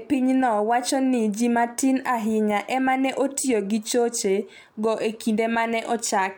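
Speech recording; no technical faults detected.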